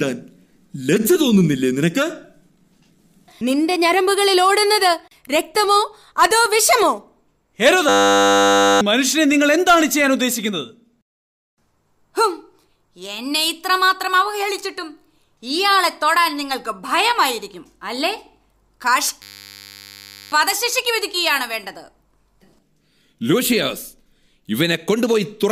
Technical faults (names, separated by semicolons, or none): system hang loop